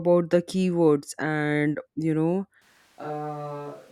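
A short speech recording that, from 2.62 s to the end, abruptly turns hollow and roomy, losing its low-end body, dropping by about 10 dB and gaining a room-noise floor sitting roughly 25 dB below the speech. The jump happens in an instant, with no fade. That sudden shift in tone, level and ambience is the mark of a switch to a distant microphone, most likely because the close mic dropped out and the recording fell back on a pickup further from the talker.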